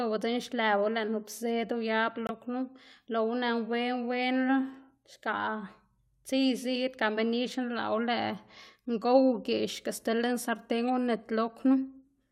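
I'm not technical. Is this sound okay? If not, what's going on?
No. At 2.27 s, just after "nup zed uyab" and before "knu loꞌwu", the speech drops to total silence for about 34 ms and then carries on. This is a corrupt frame muted: one damaged chunk of the compressed file was rejected, so the player filled its slot with silence.

At 10.82 to 10.89 s, right after "sti lën sarten", there is a brief odd chirp or burst of noise. This is a corrupt frame decoded: a few damaged chunks were played anyway, so their garbled data came out as stray sound.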